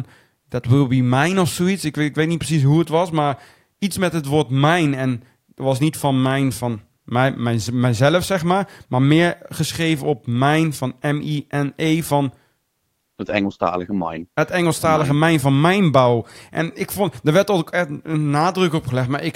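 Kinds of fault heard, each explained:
No technical faults can be heard in this speech recording. There is nothing here to list under any kind.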